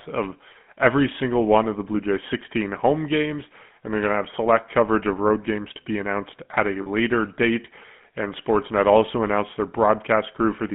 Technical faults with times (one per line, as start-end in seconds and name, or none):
0.00-10.75 GSM full-rate codec
6.82-6.89 lost GSM frames